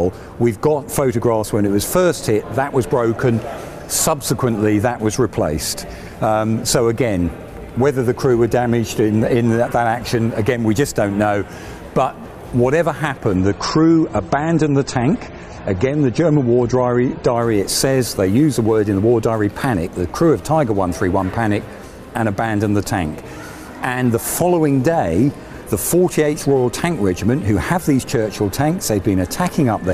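From 13.36 to 17.36 s the adaptive stream drops to a lower bitrate, consistent with 32 kbit/s MP3. Treble vanishes above 8.4 kHz, artefacts rise, and there is no gap.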